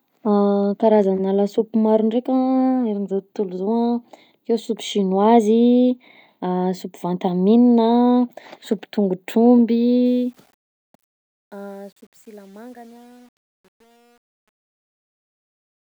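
Gritty, grainy distortion creeps into the tail of this speech clip from about 10.06 s to the end at 15.9 s, as the level fades out over its last six seconds or so. The roughness is worst from 11.12 s onward. This is truncation distortion on a fade. The fade or volume stage rounds each sample to too few bits without dither, consistent with only around 9 bits, so the shrinking waveform collapses into a few coarse square steps.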